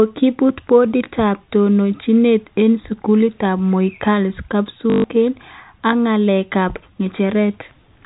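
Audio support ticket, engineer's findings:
Short robotic stutter at 4.9 to 5.04 s, about 140 ms. Packet loss with last packet repeated: the jitter buffer or concealment replays the last packet, buzzing near 50 Hz, which fits 20 ms packets over G.711 telephone-band audio.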